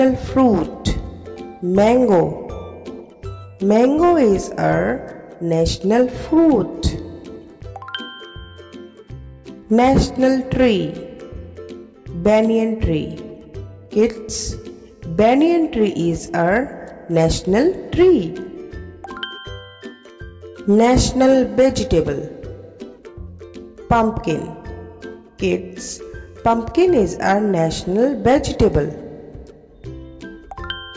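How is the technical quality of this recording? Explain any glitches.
No glitches or technical faults can be heard anywhere here.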